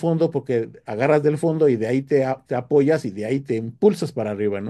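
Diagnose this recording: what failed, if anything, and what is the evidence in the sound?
Nothing in the speech stood out as a fault on listening, so no failure at any stage can be pointed to from the sound.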